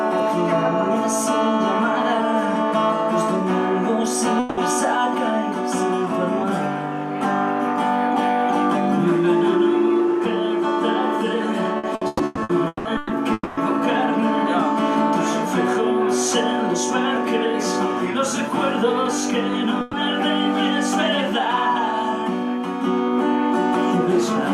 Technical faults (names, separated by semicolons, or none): long network dropout; repeated packet loss (robotic sound); burst of packet loss